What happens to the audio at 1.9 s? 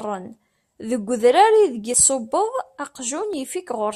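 At 1.94 s the speech skips ahead: a dropped buffer, or overrun. It's likely that the samples weren't collected before the hardware overwrote them, so about 40 ms vanished and the two sides were butted together without any gap.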